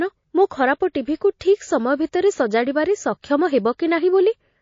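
Throughout this speech clip the sound is watery and swirly, with metallic chirping on s sounds, plainly audible damage that likely comes from MP3 compression at a low bitrate, something near 32 kbps. Bits run so short that the encoder lets weak spectral lines flicker on and off. At 1.18 to 1.21 s a hiss rises about 15 dB above the background for 32 ms ahead of a sharp onset, which then sounds smeared. This is pre-echo: quantisation noise sized for the loud attack spreads back across the transform block, and a spread this wide suggests the encoder kept long windows rather than switching to short ones.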